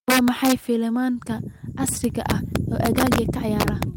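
A speech clip with integer overflow at 0.10–0.52 s, 1.88–3.18 s and 3.60–3.83 s: loud peaks, driven about 4 dB (about 6 dB in the last) past full scale, wrap to the opposite sign, giving violent cracks that show as full-height waveform flips and vertical broadband streaks.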